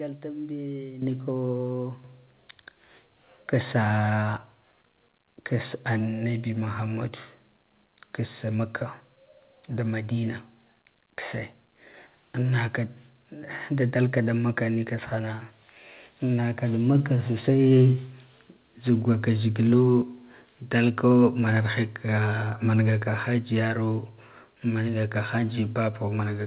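At 1.02 s, 2.04 s and 16.95 s the microphone volume is stepped up as the call software raises input gain, by about 10, 8 and 3 dB. Speech and background jump together, showing as abrupt amplitude steps in the waveform, within audio band-limited to 4 kHz.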